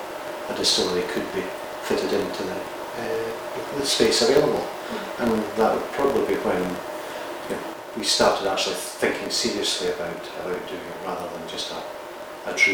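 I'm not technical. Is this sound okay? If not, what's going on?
No. A filter restarted on every block leaves a low buzz at 46.9 Hz throughout that rises and falls with the sound's level: each short chunk, which fits 1024 samples, starts with a tiny click.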